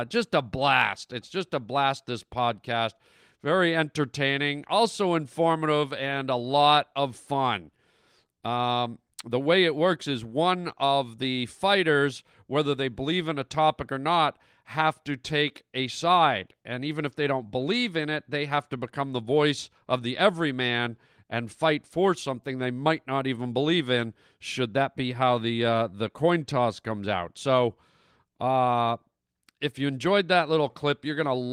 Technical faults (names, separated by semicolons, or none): none